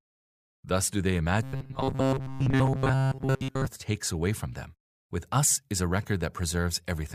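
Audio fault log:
1.43–3.67 s, robotic sound from repeated short buffers: after "do they" the speech becomes a rigid metallic buzz at 133 Hz, loosely tracking the words until "takes away from them". Likely cause is starved playback looping a 7.5 ms buffer, replacing most of the real audio.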